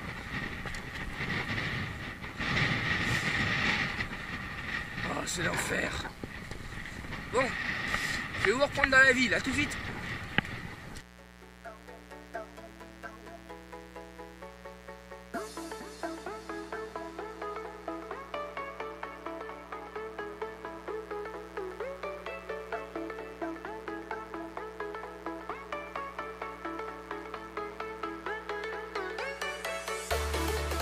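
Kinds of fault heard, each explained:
Mains buzz: A steady, raspy buzz runs under the audio for the whole clip, sitting roughly 20 dB below the wanted signal. It is built on 60 Hz mains. Sharp switching spikes, of the kind a dimmer, rectifier or poorly shielded cable lets into the signal path, repeat twice per cycle, so the interference carries a dense stack of 60 Hz harmonics extending into the kilohertz range. That is why it sounds buzzy rather than like a pure hum.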